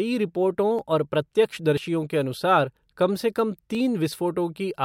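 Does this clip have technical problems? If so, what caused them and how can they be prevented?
Yes. At 0.79, 1.77, 2.76 and 3.75 s the speech skips forward by a tiny amount. This is audio missing between chunks, likely from a recorder dropping a sliver at each 1-second chunk boundary. The waveform shows abrupt joins, and the spectrogram shows thin vertical seams. To prevent this, capture with overlapping or double-buffered chunks so that no samples are lost between them.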